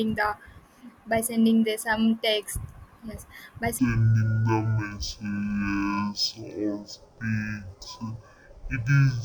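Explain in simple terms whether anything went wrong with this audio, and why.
Stereo read as mono starts at 3.79 seconds and lasts to the end. From that point the speech suddenly drags at half speed and drops a full octave, so it sounds slow and unnaturally deep. A stereo recording stores left and right samples alternately. Here the player treated that interleaved stream as a single channel, playing both sides one after another, which doubles the time each moment takes and halves every pitch.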